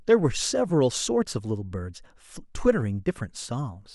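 Nothing stood out on listening to this speech recording.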